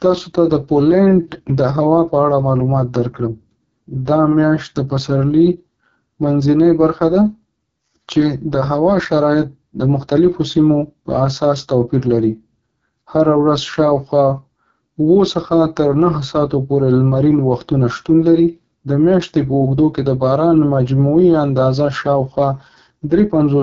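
From start to finish the speech carries the signature of the AMR wideband (HD Voice) codec, heavily degraded and sounding rough and raspy, which fits the 6.6 kbit/s lowest mode. Voicing is rebuilt from a pulse-driven vocal tract model. Above 6.4 kHz only shaped noise fills in. On a spectrogram, harmonic detail fades into a hazy band near the top, with nothing at all above about 7.5 kHz.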